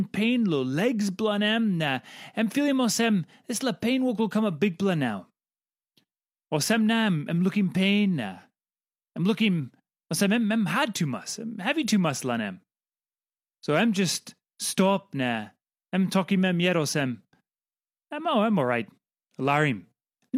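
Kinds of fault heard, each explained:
No technical faults can be heard in this recording.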